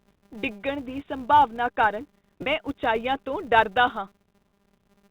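It's a speech clip with a steady 200 Hz buzz running underneath the whole thing, and that's a filter restarted on every block. The filter drops its memory at each boundary and kicks off from silence, so every block starts with a tiny transient, which suggests blocks of about 5 ms. Because those ticks scale with the signal, the buzz rises and falls with the talker's level. The second problem is packet loss with pitch repetition at 2.42 to 2.46 s, right after "ਡਿੱਗਣ ਦੀ ਸੰਭਾਵਨਾ ਕਾਰਨ". About 40 ms went missing, which fits a pair of 20 ms packets. The receiver covered the gap by looping the last pitch period, so you hear a brief held, slightly buzzy smear before the speech picks back up. You can hear that the whole thing went through G.711 mu-law telephone coding at 64 kbps, so the band tops out at 4 kHz.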